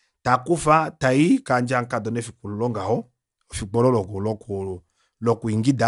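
A short speech recording with no audible technical faults: the signal holds steady throughout, with no interruptions, distortion or level problems to point to.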